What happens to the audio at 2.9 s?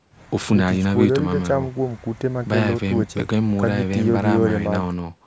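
Nothing goes wrong at 2.9 s: the speech runs on intact through that moment, with only the usual trimmed low bass of call microphone processing.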